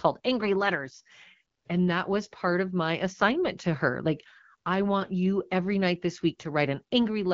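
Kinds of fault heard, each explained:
Nothing here counts as a fault; the speech simply sounds like a typical HD Voice call running at 12.65 kbit/s.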